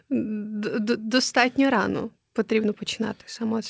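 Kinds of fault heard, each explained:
Nothing stood out on listening to this speech, which carries the usual call-path sound with no content above about 8 kHz.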